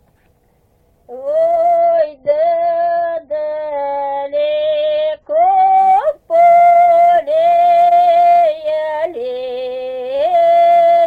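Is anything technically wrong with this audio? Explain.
Yes. From 1.78 to 5.78 s the audio drops to a lower-bitrate version of an adaptive stream. The switch is abrupt, with no gap. Nothing above 5 kHz survives, so the top end goes dull and artefacts rise. This fits the stream falling from about 96 to 24 kbit/s AAC during a slowdown.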